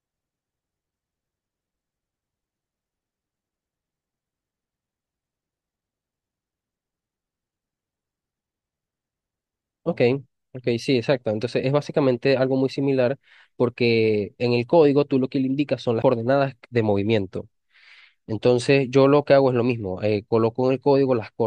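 At 16.02 s the speech has a CD skip. The laser lost its track and landed on another turn of the disc's spiral. Playback mutes for about 15 ms, heard as a small tick. The speech then resumes from a different point.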